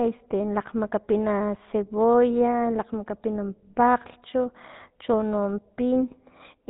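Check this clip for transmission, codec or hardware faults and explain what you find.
The speech has been through a GSM full-rate codec, and the damage is plainly audible for the whole clip. The codec models the vocal tract and excites it with a regular pulse train that keeps only a third of the excitation samples. That produces a buzzy, gravelly roughness, and nothing survives above 3.9 kHz. The bit rate fits 13 kbps.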